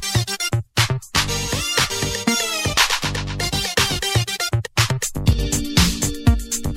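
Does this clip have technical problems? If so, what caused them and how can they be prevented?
Yes. From 5.33 to 5.39 s there is a one channel drops out fault, likely caused by one side of the stereo feed briefly losing signal, through a loose connector, a dropped wireless link or a routing glitch, so only the other channel reached the mix. In the mono sum, the shared content falls abruptly by about 6 dB for roughly 60 ms and then snaps back, and anything carried only on the missing side vanishes for that moment. To prevent it, secure the cabling and routing for both channels and monitor each side separately so a dropout is caught during recording.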